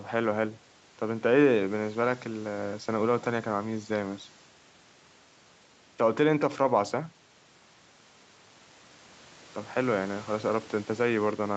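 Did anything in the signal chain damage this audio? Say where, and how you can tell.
No, nothing in the chain damaged this speech: the call microphone processing and the WebRTC path through Opus at 64 kbps are both working as designed, and the absence of content above 8 kHz is simply that path's normal bandwidth limit rather than a fault.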